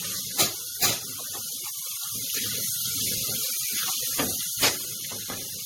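From start to finish the sound has a swirly, smeared, hollow quality, with attacks blurred and a watery churning in the upper range, the mark of generation loss. The character points to an MP3 chain around 64 kbit/s, most likely re-encoded something like seven times. Each decode and re-encode quantises on a shifted frame grid, so artefacts and spectral gaps pile up. A single low-bitrate pass would sound dull and slightly warbly, but not this degraded and hollow.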